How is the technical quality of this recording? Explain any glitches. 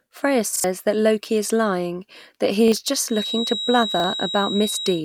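The recording has two kinds of fault: three short stutters from a repeated buffer, and a feedback whistle running through the last part of the speech.

Repeated buffer at 0.56 to 0.64 s, 2.68 s and 4.0 s. New audio did not reach the output in time, so the playback device replayed the last block it held. Each repeated piece lasts about 40 ms, which fits a 40 ms buffer. At 0.56 s it plays twice extra and roughly 70 ms of speech is lost. At the other two points it plays once extra and around 40 ms goes missing. Each is heard as a brief stutter with a hard join.

Feedback whistle from 3.05 s to the end. A thin, steady tone at 3.8 kHz sits behind the speech, about 10 dB below it, and swells and fades slowly in level. The likely cause is a loudspeaker-to-microphone loop held right at the edge of feedback, so that one frequency keeps ringing without building up.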